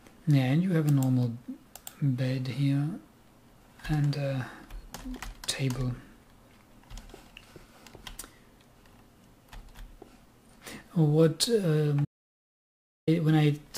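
From 12.05 to 13.07 s, an audio dropout to silence, likely a lost input: unlike a pause, even room tone vanishes, leaving plain silence.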